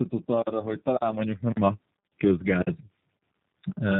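Throughout, tandem speech coding from iLBC then G.729A, with G.711 between, re-encodes already degraded speech, leaving it rough, warbly and empty above 3.8 kHz.

A gap between chunks of 50 ms follows 0.5 s blocks, at 0.42, 0.97, 2.62, 3.17 and 3.72 s, heard as short holes or dips.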